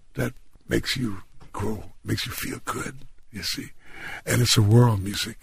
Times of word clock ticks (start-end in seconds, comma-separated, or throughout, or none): 0.16-5.35